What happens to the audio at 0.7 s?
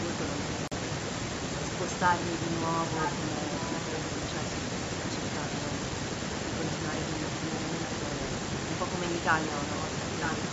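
At 0.68 s the speech drops out abruptly into about 41 ms of silence, and the sound picks up again by 0.73 s, so the gap reads as a brief hiccup rather than a fade. That pattern points to a Bluetooth stall as the likely cause: interference delayed the wireless packets, the headphones' buffer emptied, and playback paused until the resent data arrived and the stream could resume.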